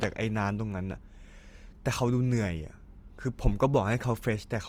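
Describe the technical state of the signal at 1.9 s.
At 1.9 s the speech carries Opus compression damage, as it does through the whole clip. The band energies stay in place, but detail inside them is rebuilt from folded lower bands or noise. So tones turn grainy, rough and noisy rather than swirling. The damage is plainly audible. The full bandwidth holds, with content up to about 20.3 kHz. The sound fits the likely cause of a music-mode encode near 24 kbps.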